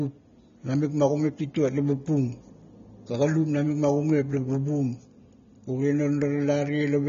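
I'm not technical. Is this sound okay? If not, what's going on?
No. The whole clip sounds dull and a bit smeared, with a fizzy, warbly edge on hissy sounds and nothing above about 7.2 kHz, so the crisp top end is missing. That's likely AAC compression, squeezed hard to make the file small.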